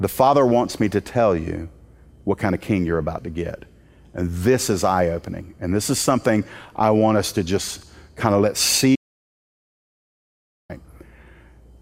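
A speech recording with an audio dropout to silence from 8.96 to 10.69 s, losing about 1.74 s. The signal cuts to silence with no room tone, unlike a natural pause or gated hiss. A lost input connection is the likely cause.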